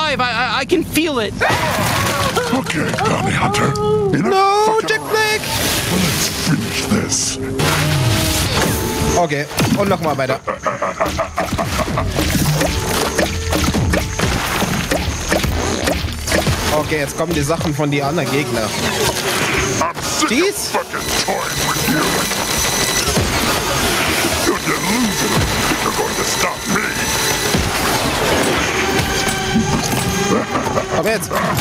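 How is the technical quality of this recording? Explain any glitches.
The recording has one persistent fault. Gain pumping runs throughout: input gain was likely set far too high, so a fast limiter clamps each loud moment. The gain swings by around 15 dB, leaving the sound squashed.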